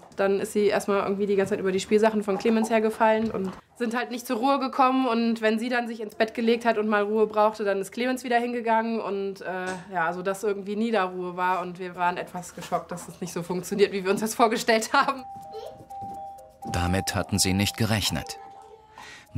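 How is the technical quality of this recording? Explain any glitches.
Nothing in the recording stands out as a glitch, so there's nothing here that needs explaining.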